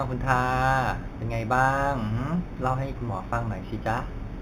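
Throughout the speech, imaging from linear upsampling is present. The band stops near 4 kHz, which suggests 8 kHz source material. Straight-line interpolation up to a higher rate leaves a mirrored copy between 4 kHz and 8 kHz, about 30 dB down, heard as a faint metallic shimmer on sibilants.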